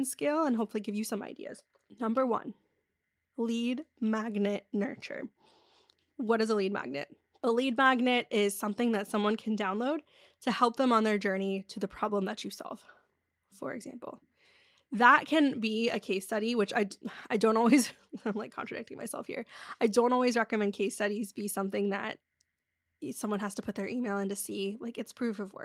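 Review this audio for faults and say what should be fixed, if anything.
Nothing here needs fixing, as there are no faults to flag anywhere in the recording.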